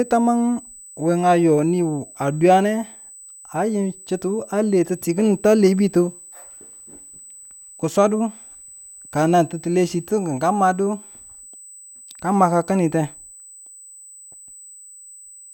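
From start to finish, a steady USB whine sits under the speech as a thin, fixed tone at 8 kHz, roughly 25 dB below the speech. The bus draws current in 125 microsecond microframes, and that rhythm leaks through the power or ground into the audio path. Unlike mains hum, which is low and buzzy at 50 or 60 Hz, this is high, and its pitch never wanders the way a switching-supply whine does.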